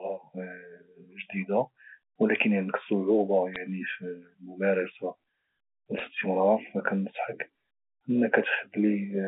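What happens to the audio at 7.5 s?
Nothing goes wrong at 7.5 s: the speech carries on intact, with the narrow telephone band of G.711 coding heard there just as it is around it.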